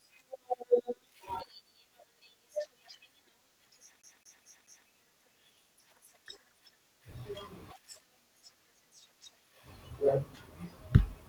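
Speech that catches at 4.02 s: until 4.88 s one 0.22 s slice plays four times, a brief mute at each jump, a CD stuck on one turn. A scratch throws the laser back each rotation, so repeats are identical and evenly spaced, unlike irregular dropout stutter.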